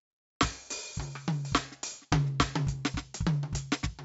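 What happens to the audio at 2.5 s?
At 2.5 s the music carries 4-bit ADPCM compression across the whole clip: each sample is coded as a coarse adaptive step, so gritty hiss rides on loud passages, attacks distort, and nothing sounds above 7.7 kHz, fitting a 64 kbps stream. A spectrogram shows level-tracking broadband noise under a hard ceiling.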